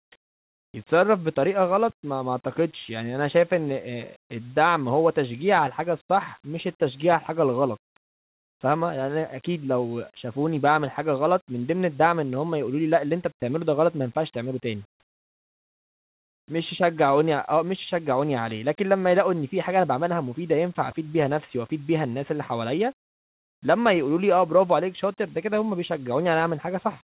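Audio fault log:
13.40–13.42 s, sound dropped by the voice detector: 10 ms of speech replaced by 20 ms of flat comfort noise, likely a detector misfire; spectrogram shows a brief uniform strip.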